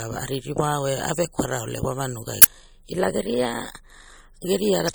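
The whole clip has a watery, swirly edge, likely MP3 compression, and the damage is plain enough to fit a low rate around 64 kbps. From 2.39 to 2.46 s there's a short glitch where damaged data in the compressed stream made the decoder lose sync. Between 2.92 and 4.45 s the speech runs about 5.4% fast and sits roughly 92 cents sharp, nearly a semitone, before snapping back, likely a drift correction step retuning the playback rate. A second data-damage blip follows at 4.85 to 4.90 s.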